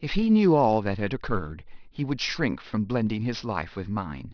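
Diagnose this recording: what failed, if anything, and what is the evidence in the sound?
Aliasing from a sample-rate conversion stage, present throughout. Sibilants sound gritty and metallic. On a spectrogram, energy runs hard up to a 5.5 kHz band edge, with mirrored high-frequency content folded below it, around 20 dB under the signal. This fits downsampling toward 11 kHz without an anti-aliasing filter.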